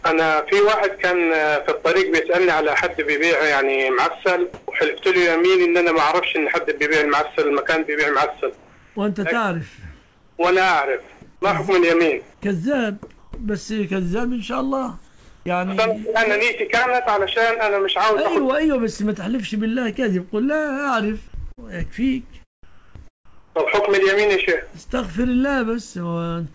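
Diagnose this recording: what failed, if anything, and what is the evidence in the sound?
Comfort noise in place of the background, at the call-processing stage. In the pauses at 4.54–4.68, 8.56–8.96, 10.04–10.38, 12.34–13.32, 15.08–15.46 and 22.63–23.79 s, the real background gives way to a smooth, featureless hiss. Its level jumps: about 8 dB louder at 4.54 s, about 2 dB quieter at 8.56 and 10.04 s, about 1 dB up at 15.08 s. This is likely discontinuous transmission, with the receiver synthesising noise. Nothing is lost, which sets it apart from a dropout.

Burst of packet loss, at the network and jitter-buffer stage. At 21.52 s about 60 ms of sound is missing. The receiver covers 53 ms of it by extending and fading the last sound, then the audio resumes further on. The held, decaying tail and the skipped material set it apart from a voice-detector cut, which leaves steady noise instead. 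The call path runs through G.722 at 64 kbps, so there is no content above 8 kHz.

Sound dropped by the voice detector, at the call-processing stage. From 22.63 to 22.95 s, about 170 ms of real sound is replaced by steady comfort noise, and the sound returns when the detector triggers again. This is likely sound misjudged as background. It differs from the pauses above because actual content disappears. It differs from packet loss because there is flat noise rather than a fading continuation of the previous sound.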